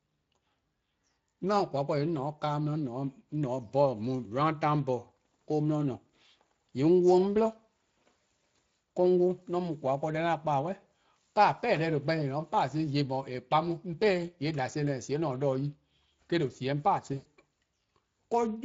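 Speex codec coding runs throughout the speech, and its damage is plainly audible. Speex is a CELP codec that builds the voice from a filter driven by a coded excitation signal. With a limited bit budget, which here fits a rate of roughly 20 kbps, that excitation is modelled coarsely. The result is a grainy, hoarse roughness on the voice that never lets up across the clip.

VoIP packet loss concealed by the speech codec appears from 17.13 to 17.28 s. About 120 ms of audio was lost, which fits six consecutive frames going missing. The decoder filled the gap by extending its last pitch and filter settings while lowering the level frame by frame, so the voice smears into a buzzy tone or coloured noise that fades. Because each decoded frame depends on the one before, the sound stays weak and distorted briefly after packets resume.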